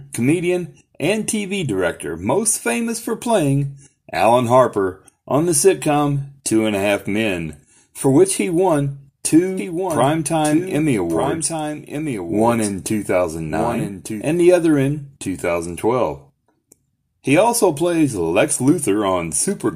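From 9.57 s, just after "for which he won", a second copy of the speech runs underneath the first, trailing by about a second and somewhat quieter. It enters and drops out abruptly, with no reverb tail or room colour, ending at 14.25 s before "the other in". This doubled audio track most likely comes from the same signal being captured again through a slower path, or from an edit leaving two misaligned copies.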